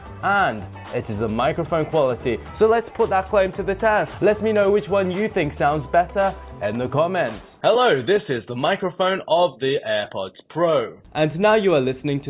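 No faults detected anywhere in the clip.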